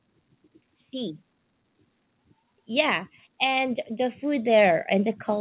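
Speech heard through a call link with nothing above 4 kHz, consistent with a narrowband G.711 A-law codec. From 2.67 s to the end, voice and background swell louder together: automatic gain rising as the gain control lifts its gain on input it judged too quiet.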